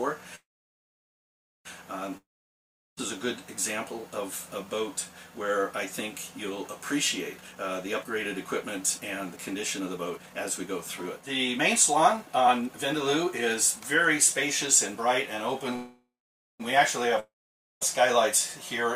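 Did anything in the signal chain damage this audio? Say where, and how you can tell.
Yes, the network and the receiver's jitter buffer did. Call audio freeze at 0.35–1.67 s and 15.76–16.62 s: the last sound continues as a fading buzz, then goes silent for about 1.2 s and 0.5 s. Playback resumes exactly where it stopped, inserting 1.3 s and 0.84 s of delay. Packets were likely held up in transit.

Long network dropout at 2.17–2.99 s and 17.20–17.83 s: the same fading fill and silence, but the sound comes back further along. About 0.8 s and 0.62 s are missing. That loss is what separates these from the freezes. The likely cause is packets that never arrived.

Jitter buffer speed-up at 7.39–7.56 s runs at 181% speed, cutting roughly 150 ms. From 8.02 to 13.28 s it runs at 114%, cutting roughly 0.7 s. The receiver trimmed pitch-period slices to drain excess buffered audio, so pitch stays unchanged, unlike a resampling error.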